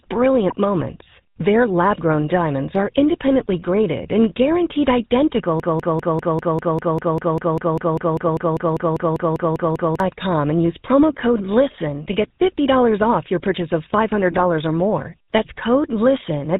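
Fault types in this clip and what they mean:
GSM full-rate codec: The whole clip passes through the original GSM speech codec. It rebuilds speech from a vocal-tract model driven by sparse pulses. Nothing above 4 kHz survives. The speech sounds plainly buzzy and gravelly throughout, which fits a 13 kbps full-rate stream.
GSM bit errors: Corrupted bits reached the decoder and garbled its filter, pitch or gain settings. Short squawks and gargles break the speech at about 0.5 s and again from 14.32 to 14.41 s. The second burst is longer and spans several frames.
Broken-record loop: From 5.6 to 10.0 s, one fragment of about 198 ms repeats exactly, back to back, about 22 times. The speech that belonged there never plays. The likely cause is a stalled player or stream resending its last buffered piece.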